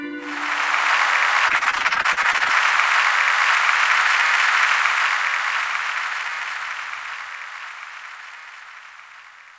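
From 1.48 to 2.51 s there is repeated packet loss, giving a robotic sound. Packets keep going missing, and each hole is patched by stretching the previous sound. Around a third of this stretch is concealed, with holes of up to 42 ms, so the audio turns choppy. Throughout, nothing is heard above 8 kHz, as expected from the wideband call codec.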